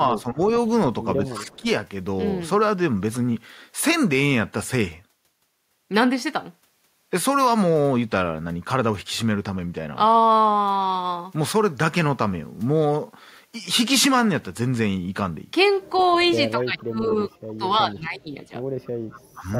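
Speech suppressed in double talk starts at 0.21 to 0.38 s, with a dip of about 15 dB. It returns at 1.29 to 1.66 s, about 10 dB down. Inside that stretch, at 1.35 to 1.6 s, an echo leak appears. A copy of the speech comes back 210 ms late, about 15 dB below it. The far end's echo canceller likely let its loudspeaker sound through. The leak recurs, fainter at about 25 dB down, at 15.96 to 16.64 s and 18.85 to 19.58 s. Suppression hits hardest at 16.53 to 17.1 s and 17.42 to 18.52 s, with drops near 25 dB. A short dip of about 20 dB follows at 19.33 to 19.44 s. Both sides talk at once here. The canceller likely mistakes this talker for echo and turns the speech down in pieces.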